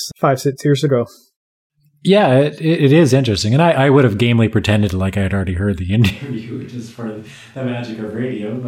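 At 6.12 s the close microphone's feed likely drops out and the recording switches to a distant microphone, which picks up more of the room. From that instant to the end, the speech turns abruptly hollow and roomy, with thinner bass, and falls about 10 dB in level. Background room noise rises into view, sitting only around 30 dB below the speech, so the voice sounds small and far away.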